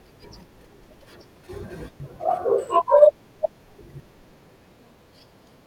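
Speech clip, and between 2.0 and 4.0 s the chunks play out of order: one 500 ms block turns up three blocks late, after audio that should follow it. Nothing goes missing, but that stretch sounds jumbled, with three hard joins.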